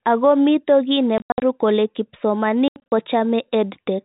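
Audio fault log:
1.18–1.42 s and 2.68–2.92 s, packet loss filled with silence: right after "mito kiy", about 180 ms of sound vanishes in short holes scattered over 240 ms, and later about 160 ms over another 240 ms. The longest gap is 80 ms, and all gaps fit a 20 ms packet length. The receiver inserted digital silence rather than concealing the loss, so each hole starts and stops abruptly. Concealment would smear or repeat the sound instead. The 4 kHz ceiling of the G.711 telephone coding is audible through both stretches.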